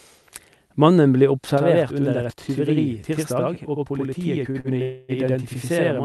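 It's a speech clip with three kinds of trouble. From 1.58 s to the end there's a channel delay (doubling): one channel runs about 85 ms late, which fits a 4096-sample buffer, and once the two are folded to mono that late copy sits right behind the original at the same level, like a tight slap echo. Around 4.5 s you get two short stalls from a late packet, at 4.51 s for 30 ms and at 4.60 s for 39 ms, where the jitter buffer ran dry and the receiver just stretched the last sound until the packet turned up, so nothing's lost but the sound hangs a touch with a slight buzz or dip. Then from 4.82 to 5.12 s there's a call audio freeze: the last sound is drawn out as a fading buzz or hiss for about 263 ms before picking up where it left off, most likely because packets got held up in transit and the buffer emptied. All of this comes through an Opus call path, so the top end stops around 12 kHz.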